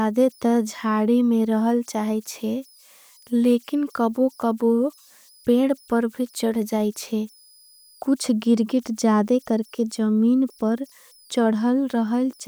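It's a speech recording with converter idle tones running right through it: a faint whistle somewhere around 5 kHz, about 36 dB below the signal, heard in the pauses and grainy under quiet passages. An undithered delta-sigma converter is falling into repeating bit patterns at low input.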